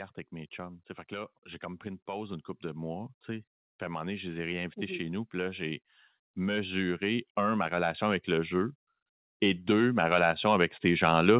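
Automatic gain rising runs from 0.31 to 8.8 s and again from 9.39 s to the end of the speech. Finding the input too quiet, the gain control lifts voice and background together, by about 14 dB in the first stretch, all through a telephone-band path that stops at 4 kHz.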